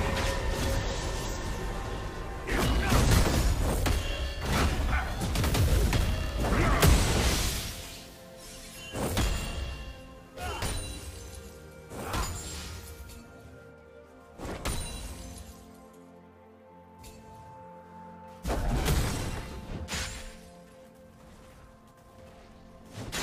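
No technical faults are audible.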